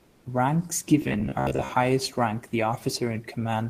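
Comfort noise in place of the background, from 0.03 to 0.23 s: for these 200 ms the room noise, about 36 dB below the speech, gives way to a flat, featureless hiss about 2 dB quieter, likely because discontinuous transmission paused sending and the receiver synthesised filler noise.

Robotic sound from repeated short buffers, from 1.02 to 1.71 s, just before "highest rank the": the speech takes on a stiff, metallic buzz at 66.8 Hz. Roughly half the audio is replaced by repeats of a snippet of about 15 ms, likely because audio arrived too slowly.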